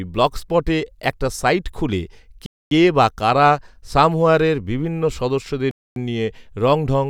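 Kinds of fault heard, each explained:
gap between chunks: the speech arrives in pieces about 3 s long, with a hard-edged 250 ms silence at each join, after "ব্লগস্পটে একটা সাইট খুলে" and again at 5.71 s. Unlike a dropout, nothing is lost; the sound resumes exactly where it stopped.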